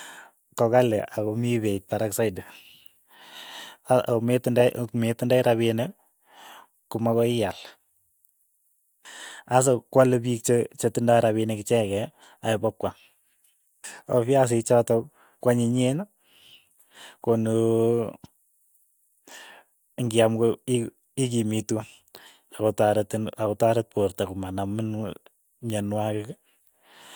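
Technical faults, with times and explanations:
No technical faults detected.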